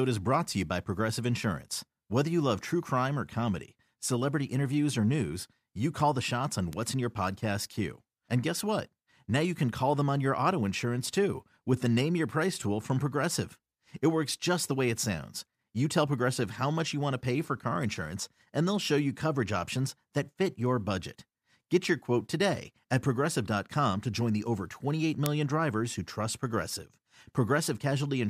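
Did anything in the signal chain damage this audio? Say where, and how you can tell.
Yes: bit error spikes at 6.73 s and 25.26 s, each a single sharp tick in the speech, the first peaking at about -20 dBFS and the second at about -2 dBFS. The damage sits on the digital side, in memory or a digital link. A flipped bit throws a sample or two by a power of two before the value snaps back, which is why each tick is broadband, instantaneous, and unrelated to the surrounding signal.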